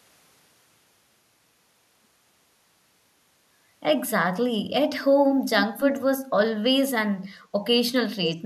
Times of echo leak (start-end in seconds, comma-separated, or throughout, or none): 8.25-8.37